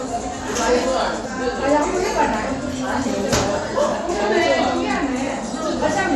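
No technical faults can be heard anywhere in this recording of sounds.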